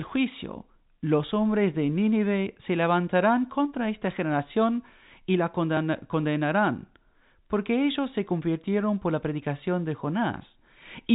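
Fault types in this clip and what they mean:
Dropped buffer (overrun): at 5.77 s there's a tiny skip forward in the speech, with roughly 10 ms gone and the two sides joined directly. It's likely that the program collected its samples too late and the hardware overwrote them.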